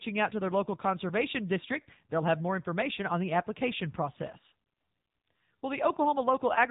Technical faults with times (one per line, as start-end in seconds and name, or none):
0.00-6.70 AMR narrowband mobile codec